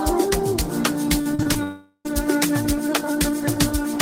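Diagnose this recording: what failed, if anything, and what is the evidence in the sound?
The network's the culprit here. From 1.21 to 1.57 s there's repeated packet loss with that robotic sound: five short holes, the longest 39 ms, each papered over by stretching the previous sound, so roughly 38% of that stretch is concealment and it comes out choppy.

Right after, from 1.63 to 2.07 s, it sounds like a long network dropout is the likely cause: the last sound smears into a fading buzz or hiss, then about 90 ms of silence, and when audio resumes roughly 420 ms has simply gone missing.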